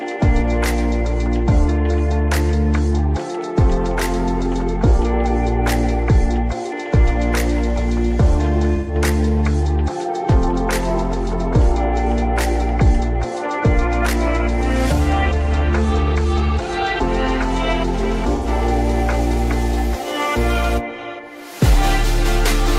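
At 8.75 s and again at 18.35 s, the audio smears into a brief noisy, phasey patch. This is AAC frame loss with concealment. About 128 ms drops first, then about 85 ms, which fits three and two lost frames. The decoder papers over each gap from the last good spectrum.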